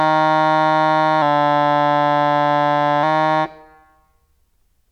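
From 1.22 s to 3.03 s the music slows by about 6% and sinks roughly 110 cents flat, just over a semitone, then snaps back to pitch. This drift correction step was likely a clock-matching resampler abruptly lowering the playback rate to rebalance its buffer.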